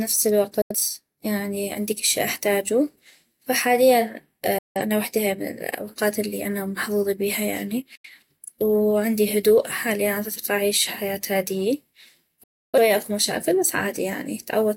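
Digital broadcast dropouts cut this speech at 0.62–0.75 s (just before "يعني عندي كل شي"), 4.58–4.81 s, 7.95–8.09 s (between "الي محظوظي بيها يعني" and "وعندي هدوء حالياً عدطيق") and 12.43–12.78 s (before "اكو مشاكل بس"). Each time the receiver lost good frames and muted, with a fade of about 3 ms. The lost audio fits whole frames of roughly 43 ms going missing, and that audio never returns.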